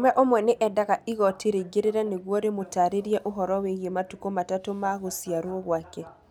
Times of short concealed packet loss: none

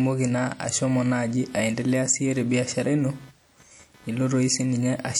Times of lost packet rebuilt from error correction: none

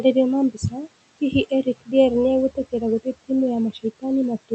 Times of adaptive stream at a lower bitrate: none

